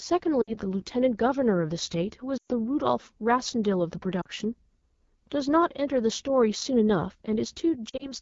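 AMR wideband (HD Voice) codec runs through the whole clip. Its roughness fits the 8.85 kbit/s mode, one of the two lowest AMR-WB rates. At that rate the codec has too few bits to describe the pitch pulses and vocal tract shape accurately up to 6.4 kHz. The speech comes out plainly rough and raspy, and the band above that sounds like hissy filler rather than real detail.

Lost AMR speech frames break up the speech four times. From 0.42 to 0.58 s there is a short drop to near silence lasting about 60 ms. From 2.37 to 2.52 s about 120 ms of audio is lost, which points to six consecutive frames. There the decoder held the last pitch and vocal tract settings while the gain fell, so the sound smears and quickly fades before recovering weakly. At 4.21 to 4.28 s a brief 40 ms dip follows. From 7.89 to 8.12 s scattered losses spread over about 120 ms, with no gap longer than 40 ms, and they leave a choppy flutter.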